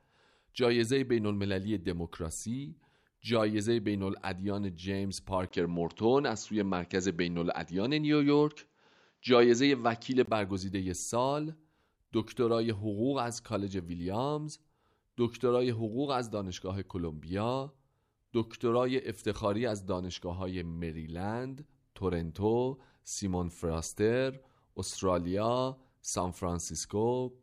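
From 5.49 s to 10.27 s the speech turns duller and boxier, with nothing above 7.6 kHz, a faint new background hiss well below the speech, and a small jump in level. A brief gap of about 20 ms marks the change. The likely cause is the input switched to a poorer device partway through, a microphone or headset path with a narrower band and its own tone, level and noise, before the original input returns at 10.27 s.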